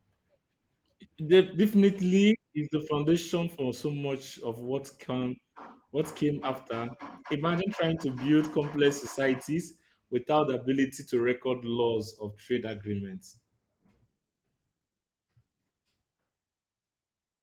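No technical faults are audible in this recording.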